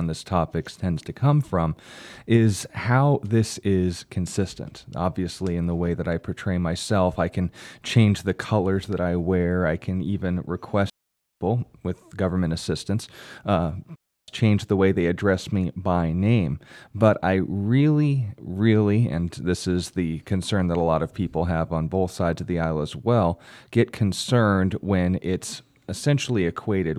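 A digital wireless dropout occurs twice: the radio link loses too much data, and the receiver mutes the output with a very fast fade rather than passing on corrupted audio. The speech stops dead from 10.90 to 11.41 s, a hole of about half a second, and again from 13.96 to 14.28 s for about a third of a second. Each gap is near silence, clean at both edges, with no noise burst before or after.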